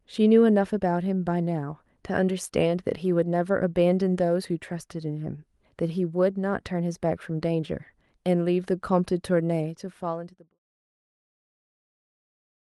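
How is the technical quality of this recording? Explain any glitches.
Nothing here counts as a glitch: the speech holds steady, and the gentle fade-out that begins around 9.5 s and ends by 10.59 s is a smooth, deliberate edit rather than a fault.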